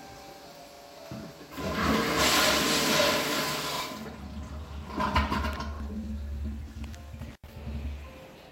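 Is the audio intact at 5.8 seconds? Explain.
No. A repeated buffer fault runs from 5.76 to 5.8 s. Fresh audio didn't reach the output device in time, so it replayed the last block once more. Each block is 40 ms long, which fits a buffer of that size. The same 40 ms slice of sound plays twice, with a hard join where the repeat starts. It comes across as a brief stutter, and about 40 ms of the real audio never gets played.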